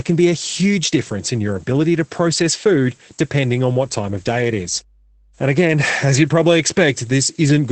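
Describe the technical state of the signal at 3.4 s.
At 3.4 s, mains hum is present, running from about 3.32 s to 5.76 s. A ground loop or nearby transformer is leaking the 50 Hz supply into the signal, heard as a steady low drone with some low harmonics, sitting well below the speech level.

Opus voice compression affects this moment as it does the whole clip. Nothing is present above about 8.5 kHz, and the speech sounds muffled and slightly hoarse. That points to the SILK linear-prediction coder in wideband mode at around 12 kbps, coding the excitation coarsely.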